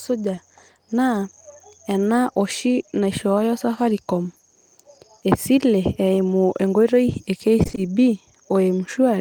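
Right at the start, around 0.35 to 0.39 s, there's a bit of short concealed packet loss. About 20 ms of audio didn't arrive in time, so the receiver papered over the hole by extending whatever sound came just before and then easing back into the real signal. You hear it as a brief smear or wobble near the top of the clip.

Later, just after "esile eimu enkoitoi e", from about 7.63 to 7.79 s, it gets worse: repeated packet loss with that robotic quality. The sound points to about four separate dropouts of up to 20 ms each, packed into that 160 ms stretch, totalling about 80 ms, so half of it is patched rather than real. Each patch barely finishes before the next hole, so the sound turns choppy, with bits missing.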